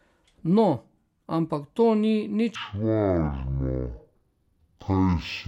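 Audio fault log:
2.55–5.47 s, stereo read as mono: right after "ampak to ni" the speech drops to half speed and a full octave lower, with a faint ghost image in the upper spectrum. Left and right samples are being read in sequence as one channel.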